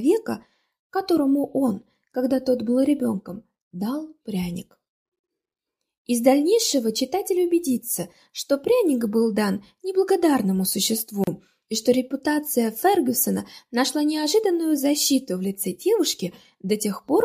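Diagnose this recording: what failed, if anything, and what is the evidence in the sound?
The failure is at the codec stage: the audio was encoded in separate pieces and joined without trimming, leaving a gap at a join of encoded pieces. Each piece keeps its encoder start-up delay and padded final frame, so silence opens in continuous sound, about 49 ms at 5.19 s to 5.24 s and 34 ms at 11.24 s to 11.27 s, six seconds apart. The edges are smeared by the codec, and the sound resumes where it stopped.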